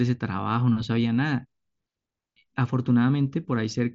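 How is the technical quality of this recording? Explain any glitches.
No glitches or faults turn up anywhere in this speech recording. It comes over a Bluetooth mSBC headset link, which leaves nothing above about 7.7 kHz and a faint grainy texture from the codec on the louder sounds.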